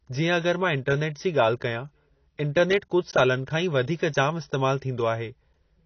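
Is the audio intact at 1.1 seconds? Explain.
No. At 1.1 s, as across the whole clip, the speech sounds dull and smeared, with nothing above 6.6 kHz and a warbling, fizzy texture on sibilants, pointing to a low bitrate. That is likely AAC compression: holes and substituted noise in the spectrum, not the clean smooth top of a simple low-pass filter.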